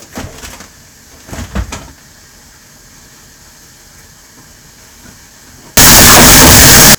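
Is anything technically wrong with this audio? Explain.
Yes. A float read as integer fault runs from 5.77 s to 6.95 s. The data was likely written as 32-bit float and then read back as 32-bit integer, so each sample's sign and exponent bits, rather than its actual level, decide the output value. In that stretch the waveform turns almost square and sits at an almost fixed, high level whatever the original level was. The result is a sudden, very loud, harsh blast in which the background noise is as loud as the main sound.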